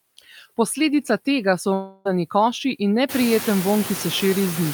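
Throughout, the background noise dips between phrases and swells under the talker: noise suppressor artifacts, pulling steady noise down by about 12 dB frame by frame. From 1.73 to 2.07 s, after "tega so", the speech gives way to a fading buzzy continuation until "koši in neprijeten" resumes, likely a long network dropout with the receiver filling about 0.32 s of lost audio. Later, the room noise rises by about 20 dB near 3 s and sits about 11 dB below the speech.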